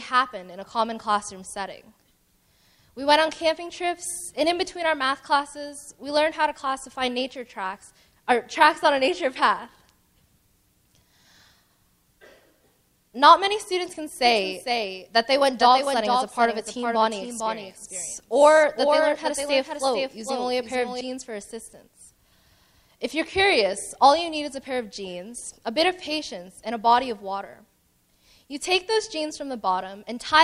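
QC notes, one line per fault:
14.25–21.01 s: doubled audio track; a dry copy trails about half a second behind, roughly 5 dB quieter, cutting in and out abruptly, likely a slower second capture path.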